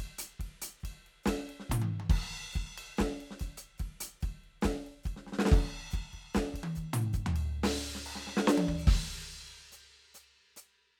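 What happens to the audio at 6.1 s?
At 6.1 s the music carries on intact, with no dropout, click, distortion or other fault at that point.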